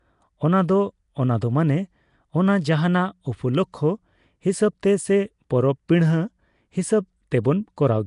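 Throughout, the speech carries a rough, hissy halo and a smeared, underwater quality with nothing above 10.6 kHz, most likely Nellymoser compression at a rate that fits about 44 kbps. At 5.88 s a brief hiss of about 10 ms softens a sharp attack. This is pre-echo: the codec's coarse noise, sized for the loud onset, has spread back into the quiet moment before it.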